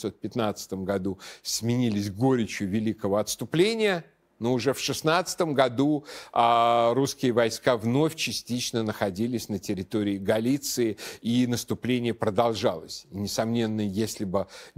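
Nothing here counts as a technical fault; the speech runs along without any glitches or interruptions to point out.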